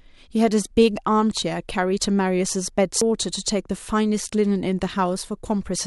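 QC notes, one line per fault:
3.01 s, CD skip: a brief tick interrupts the speech, followed by a sudden discontinuity as playback resumes from a different point. The pickup laser has been knocked off its track, by a jolt or a disc flaw, and has landed on another turn of the spiral. The player mutes for only a few milliseconds while it reacquires the track, so the jump lands as an abrupt splice, with sound missing or repeated across the join.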